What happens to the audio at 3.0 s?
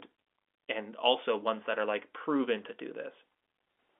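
Nothing goes wrong at 3.0 s: the speech passes through intact there, heard within the narrow band of G.711 telephone coding.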